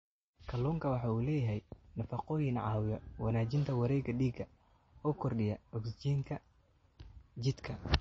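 Throughout the speech, the top end stops dead at 8.3 kHz and the sound turns watery and swirly, which is likely MP3 compression at a starved bitrate, roughly 32 kbps. A spectrogram shows a flat ceiling there and speckled, flickering holes below.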